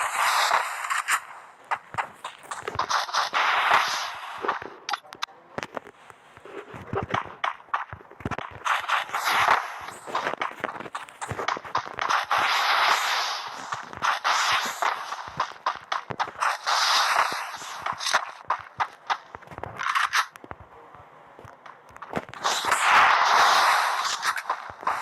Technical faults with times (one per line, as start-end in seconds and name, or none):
none